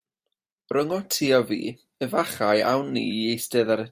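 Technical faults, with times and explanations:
No technical faults detected in the speech recording.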